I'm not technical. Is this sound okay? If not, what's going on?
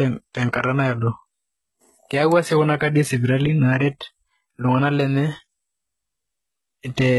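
No. The speech was likely squeezed hard by HE-AAC compression, which keeps only the lower sounds and fakes the treble by copying lower parts upward. Throughout, s sounds come out gritty and metallic, and nothing is heard above about 11.8 kHz.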